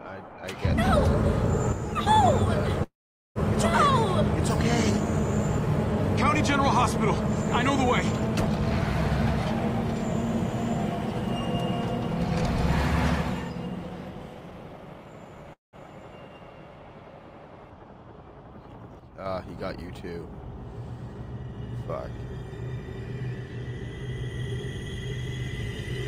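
The audio has abrupt level drops of about 6 dB from 1.72 to 2.07 s and from 19.00 to 19.26 s, with nothing else changing, which is what a mono sum sounds like when one channel drops out. The likely cause is a stereo channel briefly lost while both carried the same sound. At 2.83 s the sound stalls: the last moment is stretched into a fading buzz or hiss, then about 0.45 s of silence, before it resumes at 3.38 s exactly where it stopped. A shorter stall from 15.53 to 15.76 s adds about 0.2 s, roughly 0.16 s of it silent. These are call audio freezes, likely from delayed packets emptying the jitter buffer, so the audio was delayed rather than lost. From 13.89 to 15.44 s the audio runs at 111% speed without a pitch change and sounds hurried, and from 21.15 to 22.01 s it runs at 104%. This is jitter buffer speed-up, where the receiver cut many short pitch-period-length pieces, roughly 0.2 s in total in the first stretch and about 40 ms in the second, to shrink its backlog.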